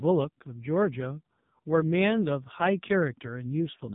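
Throughout, the speech carries heavy AMR narrowband mobile codec damage: nothing passes above 3.8 kHz, and the buzzy, synthetic vocal-tract resynthesis fits a bitrate near 5.15 kbps.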